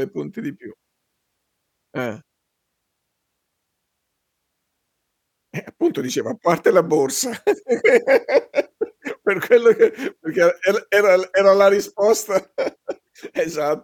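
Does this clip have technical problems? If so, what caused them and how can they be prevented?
No, nothing technical goes wrong anywhere in this speech clip, so there's nothing here that needs preventing.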